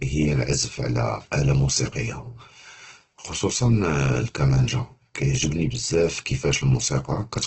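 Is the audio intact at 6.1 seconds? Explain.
No. At 6.1 s, as throughout, the speech is grainy and rough with nothing above 8.2 kHz, likely Opus compression at a low bitrate near 12 kbps filling starved bands with noise.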